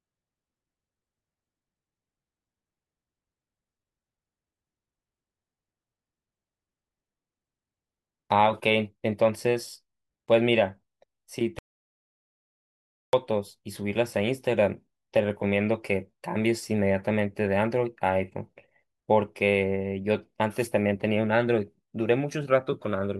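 Speech clip with one audio dropout to silence from 11.59 to 13.13 s: about 1.5 s of dead silence, no room tone, likely a lost input or momentary mute.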